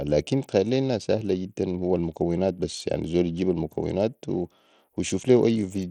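The speech runs through what is likely Bluetooth SBC compression for its whole length, at a low bit pool that fits a rate around 80 kbps. SBC splits the signal into a few wide sub-bands and shares bits with no hearing model, so the weak upper bands get starved while the rest are quantised coarsely. The damage is plainly audible: the treble thins and flickers in and out, with a gritty, aliased haze over the voice.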